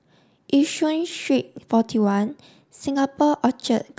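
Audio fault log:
No faults heard anywhere in this speech recording.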